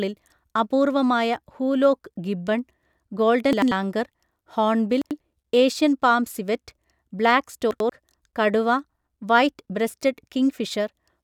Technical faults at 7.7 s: chunks out of order

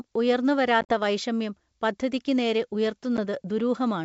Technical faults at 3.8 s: none

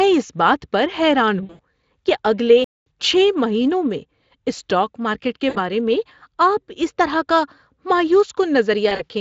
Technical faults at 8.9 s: VoIP packet loss concealed by the speech codec

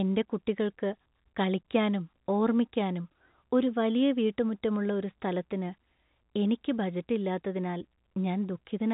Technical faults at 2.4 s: none

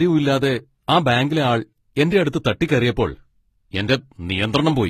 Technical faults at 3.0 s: transcoding between lossy codecs

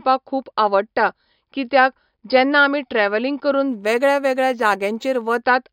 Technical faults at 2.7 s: none

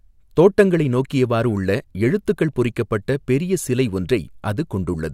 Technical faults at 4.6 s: resampler restarted on every block

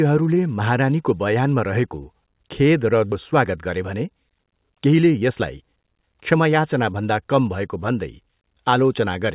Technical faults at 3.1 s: skip ahead

